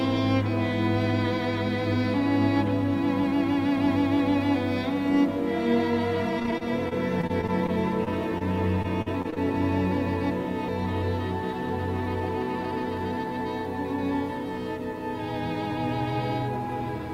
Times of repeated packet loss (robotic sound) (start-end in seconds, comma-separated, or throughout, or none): 6.39-8.42, 8.82-9.38